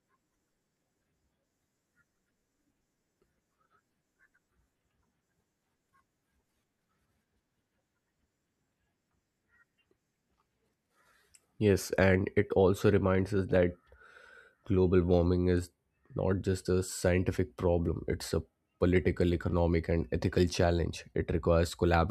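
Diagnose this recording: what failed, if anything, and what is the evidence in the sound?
Nothing failed: every stage from capture to playback delivers the speech signal intact, with no audible defect anywhere along the chain.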